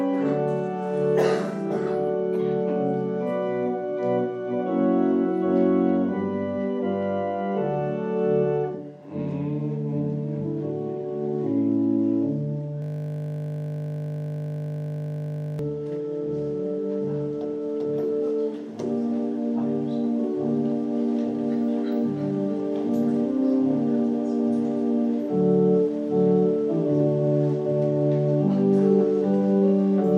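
From 12.82 to 15.59 s, a system hang loop replays one 20 ms slice of audio about 140 times, giving a steady 50 Hz buzz. The waveform shows identical repeating cells, and the spectrogram shows flat horizontal lines at multiples of 50 Hz.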